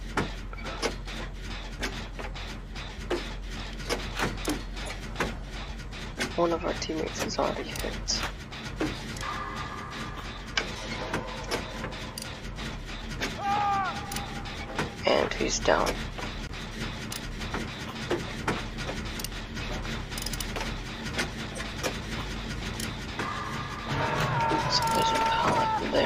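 From 1.36 s to 25.3 s a click recurs every 1.33 s, about twenty in all, each a brief discontinuity in the waveform. The steady spacing points to clock drift buffer slips, likely caused by two devices on independent clocks differing by roughly 150 ppm. The buffer between them drifts until a handful of samples is dropped or repeated, then the cycle restarts, giving the metronomic tick heard under the signal.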